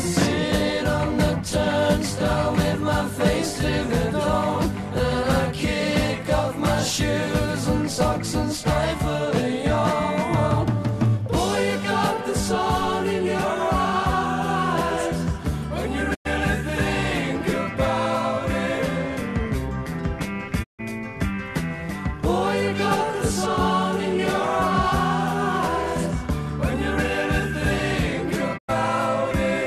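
Digital broadcast dropouts at 16.13, 20.62 and 28.57 s: the receiver mutes with quick 20 ms fades for about 96, 144 and 96 ms. Unlike clicks or concealment, that audio is simply lost.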